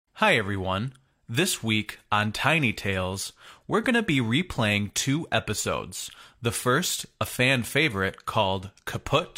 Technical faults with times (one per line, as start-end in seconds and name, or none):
none